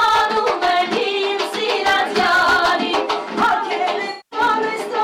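Hard clipping runs through the whole sound. The signal is pushed about 7 dB past what one stage can pass, so a small share of the peaks are sliced flat. Those flat tops add harsh upper harmonics on loud moments. This is a crackly fuzz that switches on abruptly, unlike the rounded warmth of soft saturation. From 4.10 to 4.39 s there is AAC frame loss with concealment. Roughly 0.2 s of coded data is missing, which fits about ten lost frames, and the decoder rebuilds the gap from the last good spectrum. The result is a smeared, noisy or phasey patch. This sets it apart from a plain dropout, which would cut to silence at once.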